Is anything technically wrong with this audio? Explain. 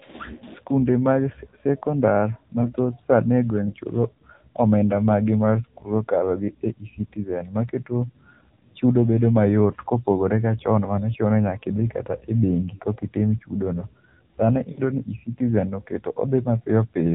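Yes. Throughout, the speech has the AMR narrowband mobile codec's sound: nothing above 4 kHz, and a buzzy, synthetic timbre from pulse-driven vocal-tract modelling, which fits the 7.4 kbps mode. A plain low-pass filter would only muffle the sound; this also adds artificial texture.

There are also lost AMR speech frames at 2.62–2.75 s, 12.76–12.83 s and 14.72–14.82 s, fitting about 20, 40 and 60 ms of lost frames. At each spot, the decoder stretches the last pitch with fading gain, so you hear a brief drawn-out warble rather than a hard silent dropout.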